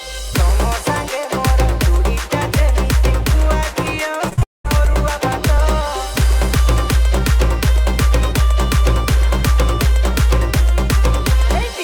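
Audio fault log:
4.29–4.69 s: repeated packet loss (robotic sound). Four short gaps, the longest 39 ms, each filled by repeating the preceding audio, so roughly a fifth of this span sounds choppy.
4.43–4.66 s: long network dropout. About 0.22 s of audio is gone, with roughly 0.18 s of near-silence before sound resumes, likely from a break in network delivery.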